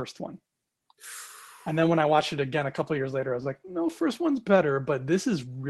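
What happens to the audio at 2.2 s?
From 2.15 to 2.21 s the speech turns briefly rough and noisy without dropping out: a lost packet rebuilt from error correction, where lower-bitrate Opus copies stood in for two lost packets.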